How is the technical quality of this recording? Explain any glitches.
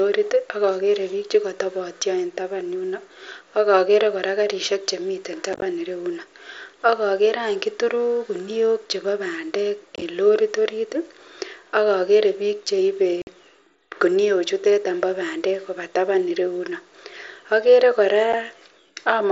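The recording has four short dropouts from unconcealed Bluetooth headset packet loss. They fall at 5.53–5.62 s after "karishek chemiten", at 9.96–10.02 s before "en lorit", at 13.22–13.27 s after "ak okere bik cheibe", and at 18.33 s. Headset packets went missing and nothing patched the gaps, so the speech has brief holes with hard, abrupt edges. The first two sound choppy, consistent with scattered lost packets of about 7.5 ms each. The mSBC wideband link carries the speech through.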